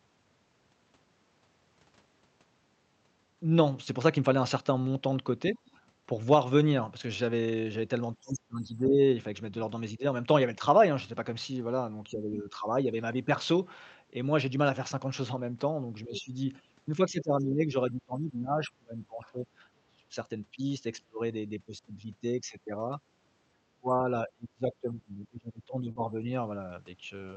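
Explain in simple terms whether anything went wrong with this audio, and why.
Yes, several things went wrong in this speech clip.

Background gated by the echo canceller: at 5.59 to 5.74 s, the room sound behind the talker briefly sinks for about 150 ms and comes straight back. The canceller turned the microphone down while the loudspeaker played. Only the background dips, not the talker, which separates it from the next fault.

Speech suppressed in double talk: the talker's own voice dips or breaks up at 8.21 to 9.0 s, 12.09 to 12.56 s, 16.05 to 16.34 s, 16.97 to 20.16 s, 21.08 to 21.2 s and 23.69 to 26.26 s. The deepest cut comes at 21.1 s. The likely cause is the canceller muting everything when both sides spoke at once.

Other side's voice leaking through: at 16.17 to 16.21 s, a faint scrap of a second voice slips in, well below the talker, during one of those dips. It is added sound rather than lost sound, likely echo from the loudspeaker that the canceller missed.

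Short concealed packet loss: at 25.91 to 25.97 s, about 40 ms of audio never arrived. The receiver patched roughly 35 ms of it by stretching the previous sound. It is heard as a brief smear or wobble, far shorter than the suppression dips around it.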